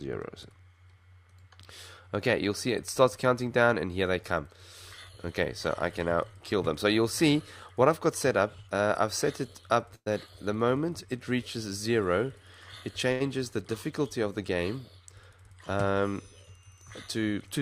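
A call audio freeze at 9.95 to 10.08 s inserts about 110 ms, including a 60 ms silence, before the sound resumes intact, likely from delayed packets draining the jitter buffer. At 13.12 to 13.22 s, a short stall from a late packet holds the sound for 78 ms with a slight buzz or dip, then continues without loss. A jitter buffer speed-up at 15.30 to 15.51 s trims around 40 ms of pitch periods, so the audio runs at 116% speed, briefly hurried.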